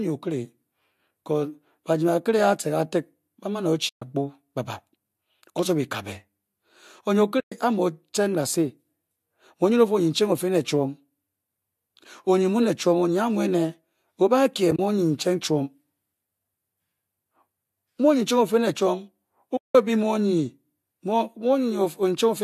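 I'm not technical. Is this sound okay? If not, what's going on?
No. The speech drops out four times, at 3.89 to 4.02 s, 7.40 to 7.52 s, 14.71 to 14.79 s and 19.57 to 19.75 s. This is AAC frame loss with muting: chunks of the compressed stream went missing and the player filled them with silence. The sound fades out and back in, so the gaps have soft edges, unlike a hard cut. The gap near 14.7 s is broken into a few very short holes.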